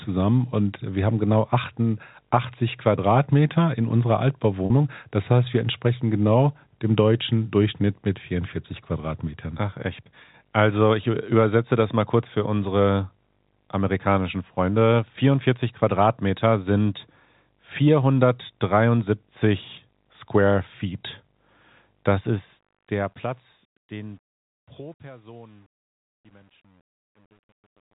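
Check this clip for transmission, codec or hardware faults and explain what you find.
Two faults stand out in this telephone-band speech, where G.711 coding keeps everything below 4 kHz.

Packet loss with pitch repetition, 4.66 to 4.70 s, just after "in unserer": a brief held, buzzy tone replaces about 40 ms of speech. Lost audio, which fits two 20 ms packets, was bridged by repeating the last pitch period until speech resumed.

Truncation distortion on a fade, from 22.09 s to the end: as the speech fades out from about 22 s, the tail turns gritty, and from 23.38 s it is at its worst. The fade stage keeps too few bits, which points to roughly 9 bits and no dither, so quiet passages collapse into coarse steps.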